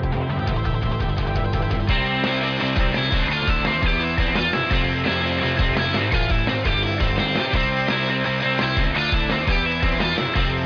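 No technical faults can be heard anywhere in the signal.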